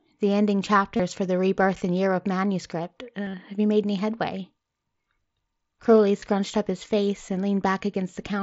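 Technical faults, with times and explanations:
0.96 to 1.00 s, 3.26 to 3.34 s, 6.20 to 6.22 s: concealed Bluetooth headset packet loss. Voice packets from the headset never reached the phone. The receiver filled each gap by repeating the best-matching piece of the last 20 ms or so of waveform. About 30 ms is patched at 0.96 s and about 22.5 ms at 6.20 s. At 3.26 s, 45 ms is lost in scattered bits over 75 ms, none longer than 15 ms. Each patch is a brief held copy of sound that came just before, beneath the mSBC codec's 8 kHz band.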